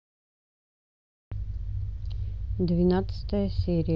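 A speech clip with what is most likely a Bluetooth dropout, where audio packets failed to reach the headphones in time and were discarded. From 1.24 s to 1.32 s the output drops to silence for about 73 ms, a gap that fits a handful of lost packets. The speech then picks up further along, as though it had kept playing through the hole. The gap overlaps the end of the smooth fade-in that rises from around 1 s to 1.28 s.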